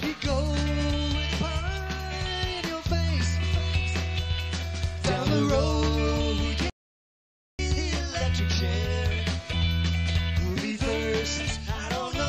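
At 6.70 s the player most likely ran dry of buffered data, or its playback thread was held up, so nothing reached the output until it caught up. That is a playback stall, and it cuts the sound off abruptly in mid-flow. Silence lasts about 0.89 s, until 7.59 s, when the audio picks up again. The gap is long enough to hear clearly as a break in the stream, not as a brief click or dropout.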